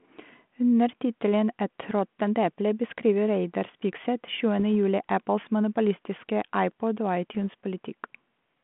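Bit errors on an ADPCM link at 1.80–1.91 s (just before "råttent eple beskriver"), 4.59–4.61 s and 7.35–7.40 s knock the decoder's predictor off, leaving short pops and rough bursts with brief level jumps.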